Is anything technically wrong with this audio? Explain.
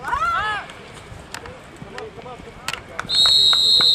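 No, nothing technically wrong can be heard in this audio. There are no faults to point to anywhere in it.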